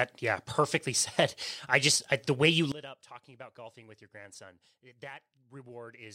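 A digital gain setting was likely applied without a ramp at 2.72 s, so the level changes between one sample and the next. From there to the end, the speech and its background noise drop together by about 21 dB, a sudden gain jump that may carry a click.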